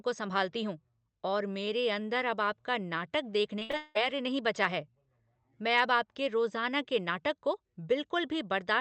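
Repeated packet loss (robotic sound) hits this speech clip from 3.59 to 3.97 s, right after "अंदर अब आपका नाटक" and before "नहीं बचा है". Audio went missing in several bursts, the longest about 180 ms, and each hole was patched by stretching the preceding sound, so roughly three quarters of that span is synthetic fill. The result is choppy. Throughout, the top end stops near 8 kHz, which fits a wideband Opus call path.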